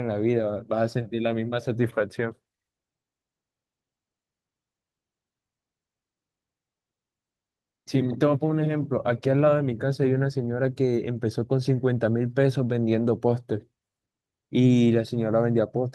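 No faults turn up anywhere in this speech recording; the signal path shows nothing to flag.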